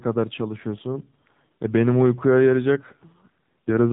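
Throughout, the speech sounds thin, buzzy and plainly synthetic, with nothing above about 3.8 kHz. That is the AMR narrowband mobile codec: 8 kHz sampling and a coarse vocal-tract model, with damage that points to a low mode near 7.4 kbps.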